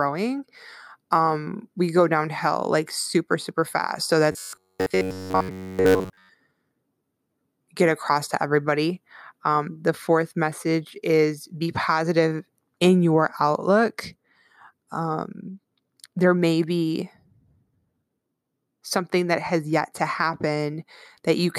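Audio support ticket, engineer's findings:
Robotic sound from repeated short buffers, 4.32 to 6.29 s, right after "super super fast so". Essentially the whole span is a fixed 93.8 Hz metallic buzz. Likely audio buffer underrun, with the last ~10.7 ms block looped while real audio is dropped. Spectrogram: rigid evenly spaced harmonic stripes at 93.8 Hz. Waveform: identical repeating cycles.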